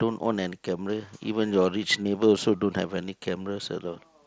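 At 2.04 s, concealed Bluetooth headset packet loss occurs: a brief stretch of the headset's voice stream failed to reach the phone, roughly 15 ms, which fits two consecutive lost packets. The receiver filled the gap by repeating the best-matching recent piece of the waveform, so the speech carries on without a dropout. It is heard only as a tiny buzzy smear, with a faint warble as the real signal resumes over the mSBC wideband link.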